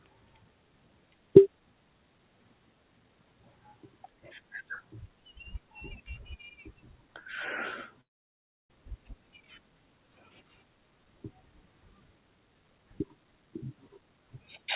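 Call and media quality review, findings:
Call and media quality review, findings:

Channel delay (comb filtering), 7.56 s to end: sound turns slightly dull. One channel lags by about a sample before mono summing. First notch sits near 20 kHz, so inside the G.711 call path's 4 kHz band it mostly darkens the top.

Long network dropout, 8.01–8.70 s: short tail of the last sound fades to silence, then audio resumes with roughly 0.7 s missing. Likely a network outage. Receiver extended the last sound briefly, then played nothing until packets returned.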